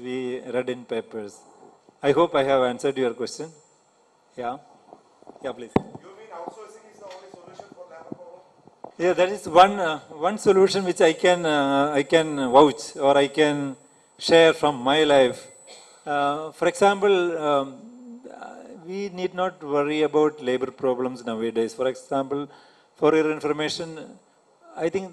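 No technical faults can be heard in the clip.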